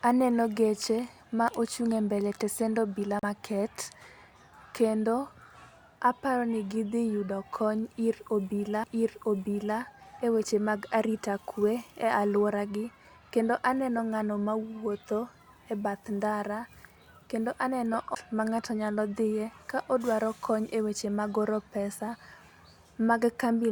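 At 3.19 to 3.23 s, right after "ochung' embele tesen obila", there's a CD skip: a knock or a flaw made the laser jump onto a different turn of the spiral, so the speech drops out for roughly 40 ms and resumes from a new spot. It happens twice more, at 8.84 s between "ni gidhi yudo kony" and "eweche mag arita kwe" with a barely-there gap, and at 18.15 s between "kendo aneno" and "ma ng'ato nyalo dhie" with about 15 ms of silence, each heard as a tick and a jump.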